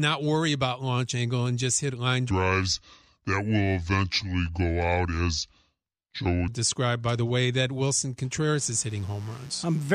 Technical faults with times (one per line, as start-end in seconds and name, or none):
2.31-6.48 section at the wrong speed
8.55-9.94 mains buzz